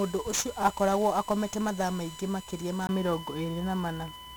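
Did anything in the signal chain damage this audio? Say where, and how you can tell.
Yes. In the analogue wiring and grounding, USB whine sits under the speech for the whole clip. Current drawn by the bus in 1 ms frames leaks into the audio through the power or ground, giving a fixed tone at 1 kHz. Its strongest component is the harmonic at 3 kHz, and the whine runs roughly 20 dB below the speech. It is a steady, pitched whistle that does not follow the talker at all.

At the codec stage, 1-bit DFPWM compression has degraded the entire recording heavily. The coder keeps a single bit per sample, which only nudges an adaptive level up or down. It cannot follow the waveform closely, so its error becomes loud broadband noise. The speech comes out fuzzy and crackly throughout, and the upper frequencies sink into hiss. The bitrate of around 48 kbps points to a 48 kHz sample rate at one bit each.

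At the capture stage, the input was likely switched to a poorer device at 2.87 s, just after "mathaa maingĩ makĩria ma", and it stays on that device to the end at 4.4 s. A gap of about 20 ms marks the changeover. Afterwards nothing reaches above 3.8 kHz, so the sound turns dull. The level shifts by roughly 5 dB, and a new noise floor appears about 35 dB under the speech.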